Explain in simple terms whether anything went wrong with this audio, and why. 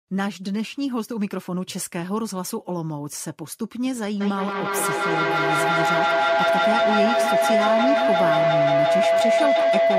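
Two devices in the same room seem to have joined one call, so the loudspeaker's sound kept re-entering the microphone, louder each time. The result is feedback howl: from 4.21 s to the end, a steady, mid-pitched tone swells over the speech, pulsing several times a second.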